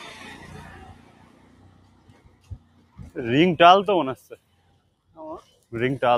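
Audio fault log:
Throughout: noise suppressor applied to music or sounds. A speech-tuned suppressor treats sustained parts and tails as noise, so level swings by roughly 20 dB and pumps.
0.93–2.97 s and 4.37–5.10 s: sound cut by the noise suppressor. The sound sinks up to about 6 dB for around two seconds, then under a second. Held parts thin out while sudden onsets pass.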